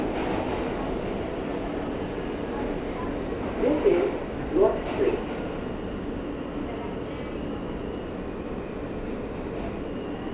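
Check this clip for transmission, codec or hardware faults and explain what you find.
Nothing here suggests a transmission, codec or hardware fault; the everyday sounds come across as you'd expect from a normal call line, topping out at around 4 kHz in the way a G.711 mu-law telephone codec does.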